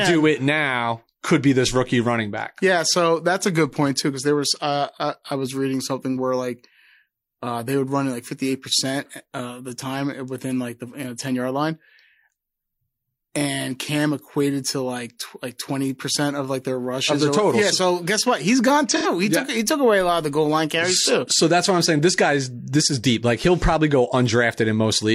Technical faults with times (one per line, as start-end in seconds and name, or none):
18.89-19.06 AAC frame loss with concealment